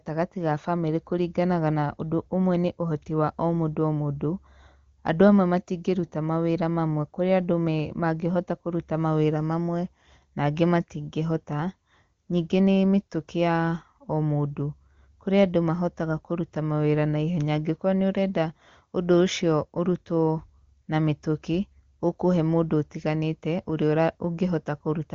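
No faults occur anywhere in this speech recording.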